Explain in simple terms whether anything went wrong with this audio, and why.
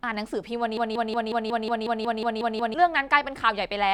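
From 0.77 to 2.74 s the speech sticks in a broken-record loop. One tiny slice, 0.18 s long, repeats 11 times back to back. The player or stream likely stalled and kept replaying its last piece. The speech meant for that stretch is lost.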